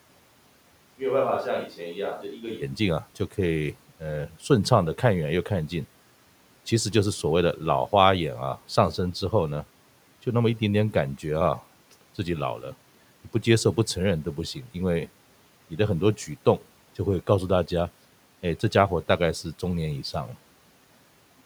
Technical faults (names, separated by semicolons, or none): switch to a distant microphone